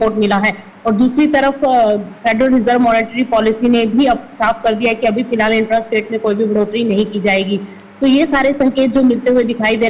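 No technical fault can be heard anywhere in the audio; the signal stays steady and intact throughout.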